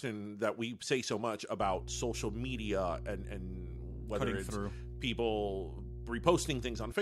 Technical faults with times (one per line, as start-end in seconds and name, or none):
1.61-6.92 mains hum